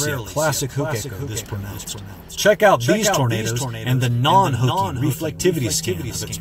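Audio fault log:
Throughout: doubled audio track. A full-band second copy of the sound trails the original by roughly 0.4 s at about 5 dB lower, with no decay or room colour. The same signal likely reaches the mix twice, through a slower second path or an out-of-step edit.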